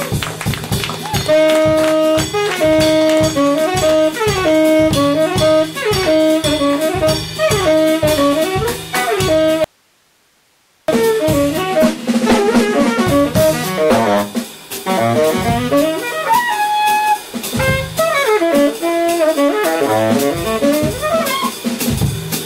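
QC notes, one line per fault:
9.64–10.88 s, audio dropout to a faint residue: signal likely lost upstream while the path stayed live, so the sound cuts abruptly to hiss roughly 40 dB down for 1.24 s.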